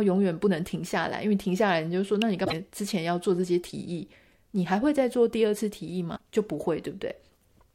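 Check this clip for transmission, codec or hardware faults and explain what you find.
Two kinds of fault are present in this speech clip: an electrical switching spike and two instances of damaged data in the compressed stream.

At 2.22 s a sharp snap sits on top of the speech, lasting about a millisecond. This is an electrical switching spike, likely from a nearby switch, motor or static discharge arcing briefly and being picked up by the audio line as an added transient.

Damaged data in the compressed stream appears at 2.42 to 2.53 s and again at 6.13 to 6.21 s, each a short glitch in the speech. Corrupted bytes there make the decoder misread frames and lose sync until it finds the next valid header.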